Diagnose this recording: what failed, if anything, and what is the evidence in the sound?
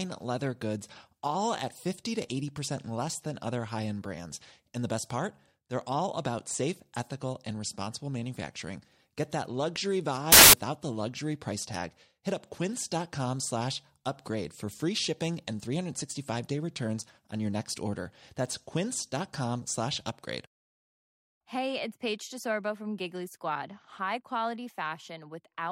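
The failure is at the sample-format conversion stage, where samples were built from the wrong bytes. From 10.32 to 10.53 s, just after "that luxury" and before "the luxury price tag", the speech is replaced by a loud burst of harsh broadband noise lasting about 0.21 s. Each sample's bytes were assembled misaligned or in swapped order, so the rapidly varying low bits became the dominant part of each value. A spectrogram would show a full-band block, and the waveform a dense, loud slab.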